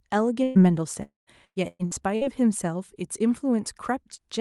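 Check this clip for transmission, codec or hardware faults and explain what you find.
The clip has three transmission faults, all within the first 2.3 seconds, carried over a call path whose audio tops out near 12 kHz, which fits Opus at around 48 kbps.

From 0.43 to 0.58 s there is a burst of packet loss. A run of consecutive packets never arrived in time, and the receiver covered about 115 ms by extending and fading the last received sound. The speech turns briefly into a held, dimming sound, then resumes with roughly 120 ms of speech gone.

From 1.03 to 1.30 s the incoming stream stops entirely, likely a long network dropout. The receiver stretches the last sound for a while, but the concealment runs out and leaves about 140 ms of silence before audio returns. In all about 240 ms of speech is lost, heard as a fading fill decaying into a dead gap and then an abrupt restart.

From 1.45 to 2.24 s there is repeated packet loss, giving a robotic sound. 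Four separate holes open in quick succession, the longest about 115 ms. Each is patched by repeating recent sound before the next arrives, so about 43% of this stretch is synthetic fill, with roughly 360 ms of speech lost. The result is choppy speech with fragments missing.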